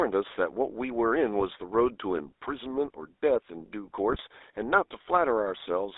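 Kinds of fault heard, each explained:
GSM full-rate codec: The whole clip carries the buzzy, gravelly texture of the original GSM speech coder, which fits 13 kbps full rate. The coder keeps a vocal-tract filter and a sparse, regularly spaced pulse excitation, so the fine detail of the speech is rebuilt from coarse pulses rather than the real waveform. The band is held to roughly 300 Hz to 3.7 kHz, and the codec damage is plainly audible throughout.
GSM bit errors: Corrupted bits reached the decoder in two short bursts, at 1.40 to 1.45 s (about 50 ms) and 4.08 to 4.21 s (about 130 ms). The longer burst fits roughly twice as many damaged frames as the first. When filter, pitch or gain parameters arrive wrong, the decoder rebuilds a distorted spectrum or a wrong level for that frame. Here that produces brief squawking and gargling breaks in the speech.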